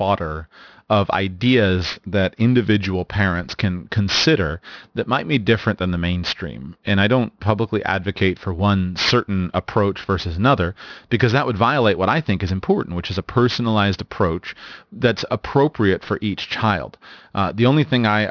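Aliasing runs through the whole recording. The speech sounds as though it was resampled down without an anti-aliasing filter, which fits a new rate of about 11 kHz. Energy above the 5.5 kHz fold point mirrors back below it onto unrelated frequencies. Sibilants and fricatives come out gritty and metallic. The spectrum stays dense right up to 5.5 kHz and then stops sharply, and the folded content sits only around 15 dB under the signal.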